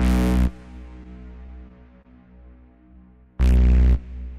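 An everyday-sound recording, with one short stall from a late packet at 2.02 to 2.07 s. The sound there hangs on briefly instead of moving on. A packet arrived late and the jitter buffer ran dry. The receiver stretched the last bit of audio, about 30 ms of filler, until the packet turned up. Playback then resumed where it left off. Nothing is lost, but everything after runs about 30 ms late. The held stretch carries a slight buzz or dip.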